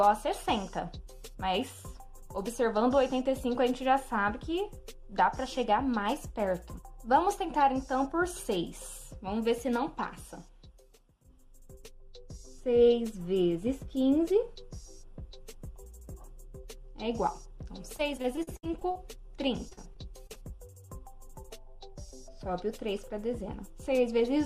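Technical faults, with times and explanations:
17.97–18.97 s: repeated packet loss (robotic sound). Dropouts up to 59 ms come close together. Each is patched by repeating the last sound, which makes it choppy and robotic.
19.69–20.37 s: repeated packet loss (robotic sound). A shorter burst with holes up to 38 ms, again filled with stretched sound, and the same robotic, broken texture.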